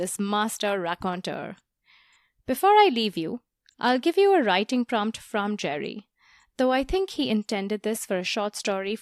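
From 5.23 s, just after "you a writing prompt", sample clock jitter sets in and lasts to the end at 9.02 s. The converter's clock wanders by around half a microsecond. Each sample lands slightly early or late. Where the speech waveform changes fastest, the timing error turns into a larger amplitude error. The result is a faint hiss and roughness, roughly 50 dB below the speech. It grows on loud and bright sounds and disappears in the pauses.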